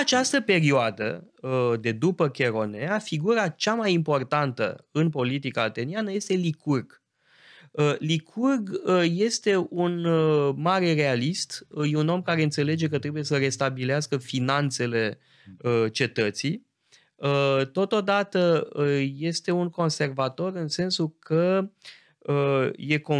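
No technical faults can be heard anywhere in the speech recording; the signal stays steady and intact throughout.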